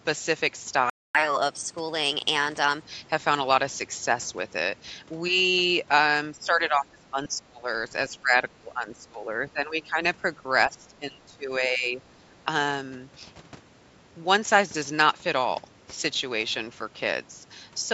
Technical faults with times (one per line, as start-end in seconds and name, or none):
0.90-1.15 playback stall
1.15-2.82 catch-up at higher speed
6.37-7.70 speech suppressed in double talk
8.14-10.00 speech suppressed in double talk
10.68-12.33 speech suppressed in double talk